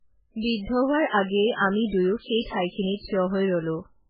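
Throughout the speech, heavy MP3 compression likely explains the watery, swirly sound; a spectrogram shows nothing above 5 kHz, pointing to a very low bitrate near 8 kbps.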